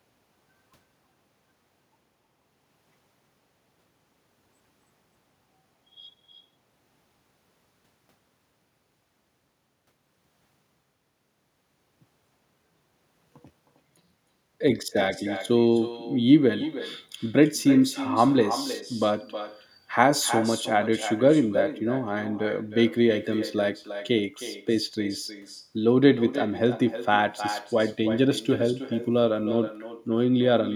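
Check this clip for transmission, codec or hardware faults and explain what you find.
One fault runs through the whole speech clip: echo with no canceller. Every phrase returns about a third of a second later, roughly 12 dB quieter and thinner. The far end's loudspeaker feeds its microphone uncancelled. Waveforms show faint delayed copies trailing each burst, and spectrograms show ghost harmonic patterns offset in time.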